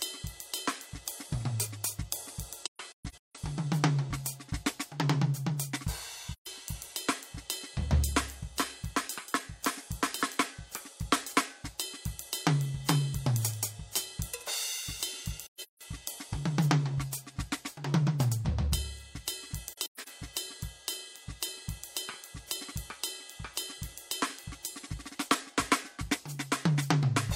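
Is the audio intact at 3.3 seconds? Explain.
No. At 3.3 s the music sits inside AAC frame loss with muting, from 2.63 to 3.37 s. The decoder zeroed lost frames, so overlapping windows fade each gap out and in. About 469 ms drops out in soft-edged holes, the longest around 150 ms.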